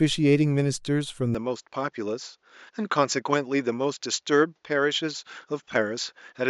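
A speech recording: from 1.35 s to the end, the sound turns duller and around 5 dB quieter, with nothing above 7.3 kHz and a faint new noise floor, likely an input switched to a poorer device.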